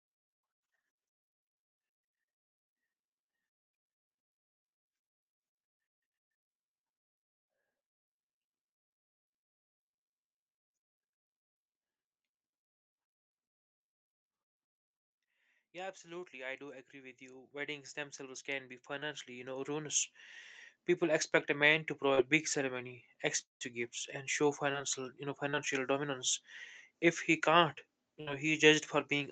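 Speech heard over a call, where the sound stops at 8 kHz and a spectrogram shows an empty band above that line. Automatic gain rising runs from 15.72 to 20.21 s: the gain control judged the input too quiet and raised it by about 17 dB, so voice and background swell together over more than four seconds. On a waveform the envelope widens steadily across that span, and on a spectrogram the noise floor between phrases brightens along with the voice.

Short concealed packet loss occurs four times: 18.99–19.03 s; 22.15–22.19 s, between "expect a man to" and "big ceremony"; 24.73–24.79 s, after "gifts and show" and before "you know"; and 25.51–25.55 s. Each time about 20 ms of audio arrived too late, and the receiver bridged the hole by extending the preceding sound before blending back. The result is a brief smear or wobble. A spectrogram shows a few tens of milliseconds of smoothed, repeated harmonics or flat noise where the fine detail should be.

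At 23.41–23.63 s there is a gap of about 200 ms. It begins with a fading continuation of the previous sound, roughly 150 ms of it is silent, and the speech resumes further on with that portion missing. This is likely a long network dropout. On the waveform it is a decaying tail followed by a flat line, and on the spectrogram a blank vertical strip.

A burst of packet loss hits at 28.21–28.29 s, right after "he can't". About 60 ms went missing, and the concealment held the last sound and turned it down until real audio returns. The spectrogram shows steady, fading bands in place of the speech that should be there.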